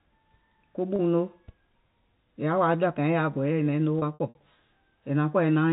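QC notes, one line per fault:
0.96–0.99 s, packet loss with pitch repetition. About 30 ms of audio drops out, which fits a single lost packet. The receiver bridges the gap by looping the last pitch period, so the sound briefly holds with a slight buzz before normal audio resumes.
3.99–4.35 s, packet loss with pitch repetition, just after "naiŋ noo". About 150 ms is lost in several gaps spread over 360 ms, the longest about 60 ms. Each gap is filled with a repeated pitch period that fades as it goes. The result is a stuttering, buzzy stretch heard through the narrow telephone band.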